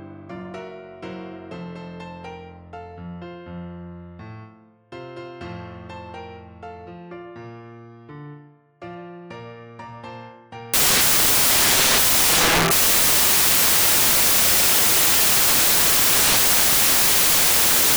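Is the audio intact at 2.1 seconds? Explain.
Yes, the audio is intact at 2.1 seconds, with no dropout, click, distortion or other fault at that moment.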